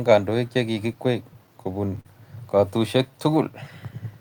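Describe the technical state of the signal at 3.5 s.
At 3.5 s the speech is in the last moments of a jitter buffer slow-down that runs from 3.11 to 3.53 s. The receiver stretched the audio by repeating single pitch periods to rebuild its reserve, adding 35 ms and playing at about 93% speed with unchanged pitch. It sounds drawn out and slightly dragged. On a spectrogram the harmonics stay level but widen in time. The waveform shows near-identical periods repeated back to back.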